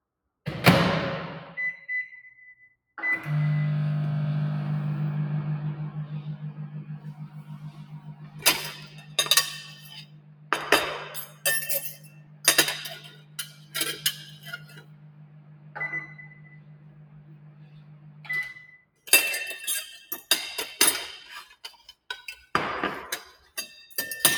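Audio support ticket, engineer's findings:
Noise suppressor applied to music or sounds, whole clip: speech-tuned suppressor pumping, gain swinging around 20 dB. Waveform envelope breathes, and spectrogram tails and steady bands fade while onsets survive.

Sound cut by the noise suppressor at 2.75–2.97 s, 6.6–19.06 s, 21.54–22.09 s and 23.37–23.57 s: sustained sound mistaken for noise, dropping up to about 15 dB (about 12 dB at the last). It shows as hollowed waveform and dimmed spectrogram regions, with most of the long middle stretch affected.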